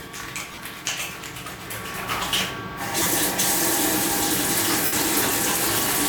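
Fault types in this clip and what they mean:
Lost LE Audio frames: Bluetooth audio dropped out, so the decoder filled short gaps with a noisy smear of the preceding sound, near 0.52, 3.03 and 4.85 s.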